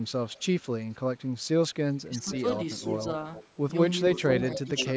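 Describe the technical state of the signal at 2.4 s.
Two faults fall around 2.4 s. From 2.04 to 2.3 s the speech dips by as much as about 15 dB, for roughly a fifth of a second in total. This is speech suppressed in double talk. Two sides were likely talking at once. The echo canceller could not tell its own talker from the returning echo, so it turned everything down. The voice drops and thins in patches.

Right after, from 2.33 to 2.39 s, there is an echo leak. A short scrap of earlier speech returns 482 ms late, about 15 dB below the voice. The far end's canceller likely did not fully remove what its microphone picked up from the loudspeaker. The leaked copy sounds brief and faint. It sits within the call's normal band, which stops at 8 kHz.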